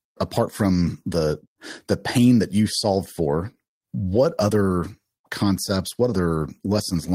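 Clock drift between sender and receiver runs through the whole speech clip. The sender's clock is about five percent fast. The receiver's buffer keeps overfilling. Repeated timing corrections follow from 0.08 to 6.96 s. The receiver trims short pieces to keep pace, at 105 percent speed. They come as small, unevenly spaced hiccups.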